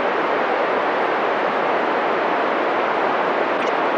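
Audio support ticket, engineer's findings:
Loud chirp/noise burst, error peak around -5 dBFS, 3.57–3.69 s. Corrupt frame decoded in codec path: flipped bits misread as gains and codes put energy at wrong frequencies; span fits about three frames. Unlike loss concealment: no muffled fill, no fade.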